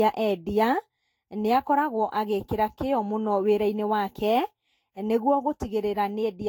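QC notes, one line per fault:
Throughout, generation loss: speech sounds swirly, smeared and hollow, with blurred consonant onsets and nothing above 17.3 kHz; this is likely repeated lossy re-encoding, around seven passes, each on a shifted frame grid, which fits a Vorbis codec near 65 kbit/s.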